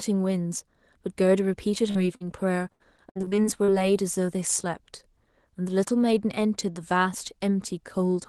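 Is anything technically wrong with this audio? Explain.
Yes, there are a couple of network-related problems. First, short concealed packet loss at 1.91–1.97 s and again at 2.17–2.22 s. Roughly 40 ms of audio arrived too late each time, and the receiver papered over it by extending the last sound before blending back, so you hear a quick smear or wobble.

Then from 2.72 to 3.71 s there's repeated packet loss, giving a robotic sound. Holes keep coming, the longest about 74 ms, and around 29% of that second is patched-in guesswork. Each patch barely finishes before the next, so it goes choppy with bits missing. All of this rides on a call codec whose top end stops around 12 kHz.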